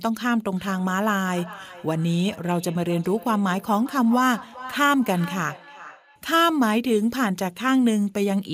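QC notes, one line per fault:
0.56–6.29 s, feedback echo between two devices: each word returns roughly 400 ms later, thinner and ringing, at most about 18 dB under the speech, because a second device replays this microphone's signal, which its canceller can't remove. Spectrogram shows faint delayed copies of each syllable's harmonics.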